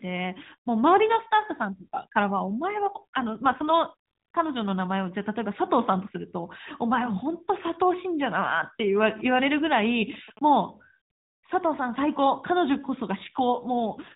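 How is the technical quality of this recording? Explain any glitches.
The recording has two kinds of fault on top of narrowband AMR mobile speech, whose 4 kHz ceiling and light codec roughness are audible throughout.

AMR rate drop, from 2.74 to 3.73 s and again from 13.24 s to the end: the speech turns rougher and more synthetic, with no gap and no change in bandwidth. This fits the network lowering the codec from 12.2 to 5.9 kbps and spending the freed bits on error protection.

GSM signalling bursts, from 8.96 to 10.39 s: a galloping dit-dit-dit of short buzzes at 217 Hz sits about 20 dB below the speech. A nearby 2G phone transmitting signalling bursts is being rectified by the audio circuitry.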